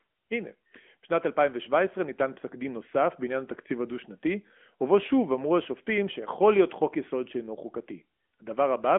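Throughout the speech, the signal has passed through the AMR narrowband mobile codec, sampled at 8 kHz with only a 200 to 3400 Hz line band, and its mid-rate coding, consistent with roughly a 10 kbps mode, models the voice from sparse pulses, leaving it muffled, plainly buzzy and synthetic.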